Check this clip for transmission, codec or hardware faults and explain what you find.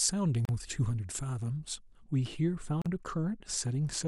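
Two kinds of fault turn up here: a stretch of uncorrected treble boost at the start, and two short dropouts where separately encoded pieces were joined.

Pre-emphasis left on runs from 0 to about 2.04 s. The boost follows the CD 50/15 µs curve, and the matching de-emphasis never got applied on playback, so the top end sits about 8 dB hotter at 10 kHz than at 1 kHz. The speech comes across thin and overly bright, with sibilants sticking out sharply, until the tonal balance drops back to normal after the 2 s mark.

Then there are two gaps at a join of encoded pieces: one from 0.45 to 0.49 s, lasting about 38 ms, and another from 2.82 to 2.86 s, about 41 ms. Each piece went through the encoder on its own, and the start-up delay and end padding from each run weren't trimmed before splicing. That leaves a brief hole of silence in otherwise continuous speech, with smeared edges, and then the sound picks up right where it cut off.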